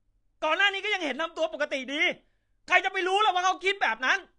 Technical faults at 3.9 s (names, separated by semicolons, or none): AAC compression